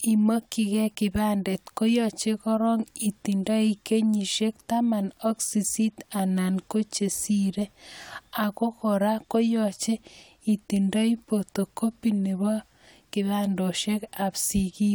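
No technical faults turn up anywhere in this speech recording. The audio holds steady throughout, with nothing out of place at any point.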